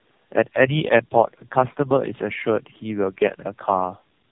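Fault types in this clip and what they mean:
Tandem speech coding: The speech sounds like it passed through about three low-rate speech coders in a row, each re-encoding the previous one's decoded output, ending in a narrowband coder like AMR-NB. The damage compounds, so the speech is rougher, duller and more warbly than one coder alone would make it. On a spectrogram, energy stops at 3.5 kHz, and harmonics look smeared and unsteady. The waveform shows a blurred, noisy fine structure.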